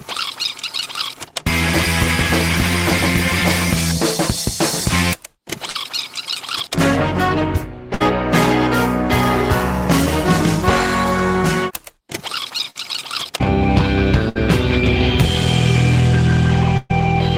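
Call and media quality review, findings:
Burst of packet loss at 5.69, 7.94, 12.70, 14.29 and 16.77 s. The receiver's concealment holds and fades the last sound for 50 to 120 ms, then audio jumps ahead, with 40 to 120 ms lost.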